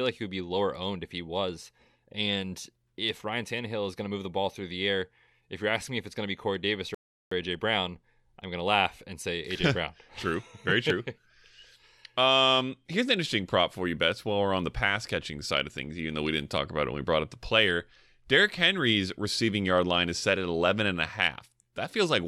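At 6.95 s a rebuffering stall drops the speech into silence until 7.31 s, then resumes seamlessly. That's 0.37 s added, a flat gap in the waveform and a blank spectrogram column.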